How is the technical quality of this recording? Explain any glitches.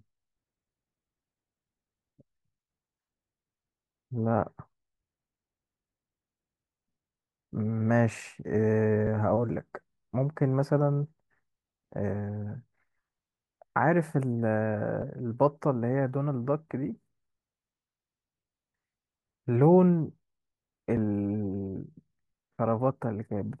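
The speech is marred by three small skips, at 9.07 s, 15.02 s and 20.97 s. At each one, a fraction of a second of speech, roughly 50 ms, simply vanishes, and the sound on either side is butted together with no gap, so the flow jumps forward abruptly. The skips recur about every 6 seconds, and that regular spacing points to audio missing between chunks: the likely cause is a recorder or processor that handles the signal in 6-second blocks and drops a sliver each time it closes one block and starts the next.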